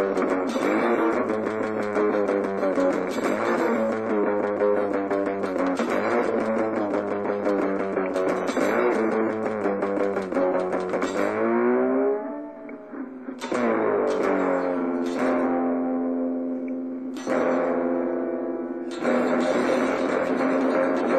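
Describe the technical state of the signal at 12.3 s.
At 12.3 s the signal runs intact, with no dropout, distortion or other fault audible at that point.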